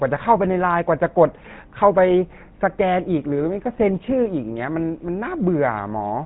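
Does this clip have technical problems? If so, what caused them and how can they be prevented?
Yes. Throughout, the speech has the buzzy, gravelly roughness of the GSM full-rate codec, consistent with 13 kbps coding. Regular-pulse excitation rebuilds the voice coarsely, and a spectrogram shows nothing above 3.9 kHz. To prevent it, record or route the audio through a wideband path rather than a legacy GSM call.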